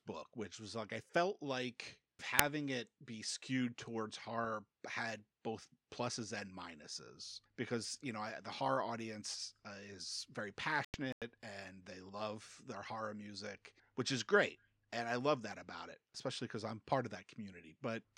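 At 2.39 s a corrupt FLAC frame produces a sharp click peaking at about -10 dBFS, and at 4.44 s a much fainter tick at about -37 dBFS follows. In each, flipped bits slipped past an unchecked checksum, so the decoder's prediction ran on wrong values. That produces added noise rather than a gap, and the following frame decodes clean.

From 10.85 to 11.22 s the sound drops into abrupt, complete silence for about 0.37 s, which fits several consecutive frames being rejected. This is a corrupt frame that was muted: the decoder discarded the damaged data and the player substituted silence. It differs from the earlier clicks because nothing is heard in the hole, while timing afterward stays intact.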